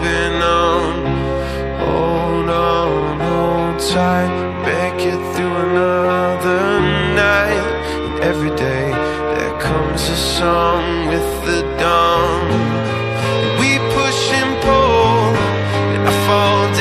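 No faults can be heard anywhere in this recording.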